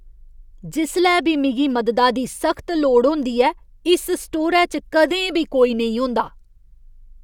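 Nothing goes wrong anywhere in this bit of speech, so there's no technical fault to point to.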